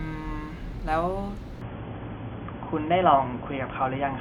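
At 1.61 s the speech abruptly turns narrow and boxy, with nothing above 3.4 kHz, a level shift of a few decibels and a faint new noise floor. There is no gap. This is likely an input switched to a poorer device, such as a headset call profile.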